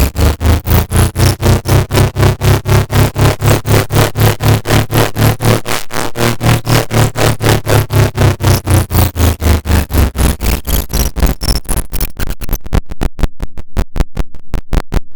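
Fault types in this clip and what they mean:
No technical faults can be heard in this sound recording; the signal holds steady and continuous, with no dropouts, distortion or other defects at any point.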